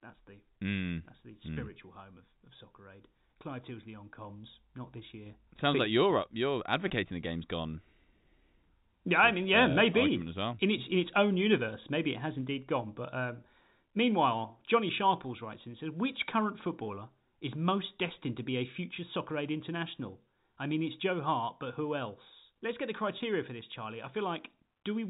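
At 6.88 s and again at 23.18 s you get packet loss with pitch repetition: a 20 ms gap, consistent with a single lost packet, patched by repeating the last pitch period, heard as a brief buzzy hold in the G.711 telephone-band audio.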